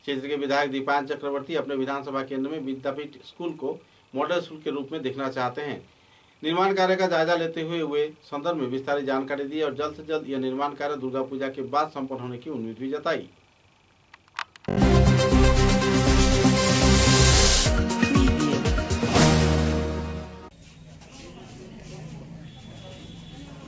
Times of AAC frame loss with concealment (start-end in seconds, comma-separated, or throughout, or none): none